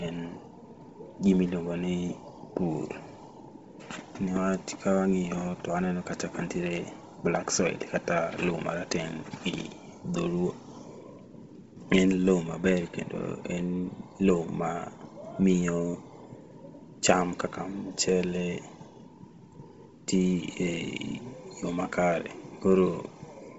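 Bluetooth LC3 compression throughout: nothing above 7.7 kHz, breathy, grainy speech, likely from a low-bitrate LC3 link, consistent with 24 kbps, 7.5 ms frames.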